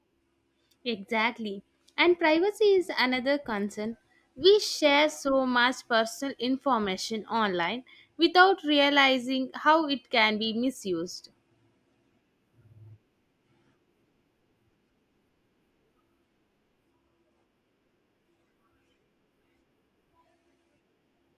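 No technical faults can be heard anywhere in the recording.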